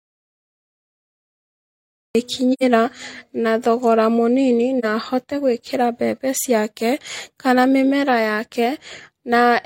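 Audio dropout to silence covers the opening of this speech clip, already under way at 0 s and lasting until 2.15 s. Those first two seconds are silent with no room tone at all, so the input was likely cut off by a lost device or link while the recorder kept writing silence. The speech then enters abruptly, and whatever preceded it is gone. AAC frame loss with muting follows in two places. The first is at 2.53 to 2.63 s, a gap that fits two lost frames, about 85 ms of audio. The second falls at 4.79 to 4.85 s, between "na thogora mũnini" and "na ahote gwĩkĩra mbembe", and fits a single lost frame of about 43 ms. In both, the decoder zeroed the missing spectrum, and the overlapping transform windows taper the sound down and back up, leaving a soft-edged hole for the two-frame run and a brief dip for the single frame.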